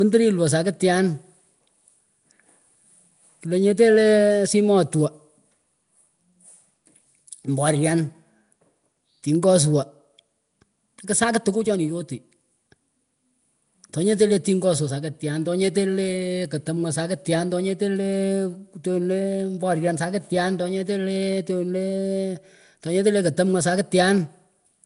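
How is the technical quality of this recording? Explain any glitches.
The codec damage is plainly audible for the whole clip. Nellymoser compression is likely the cause. Weak bands are replaced with noise rather than coded, giving the speech a rough, hissy halo and a smeared, underwater quality. Nothing sounds above 10.6 kHz, which fits a rate near 44 kbps. Unlike a simple low-pass, the noise-filled gaps make it grainy as well as dull.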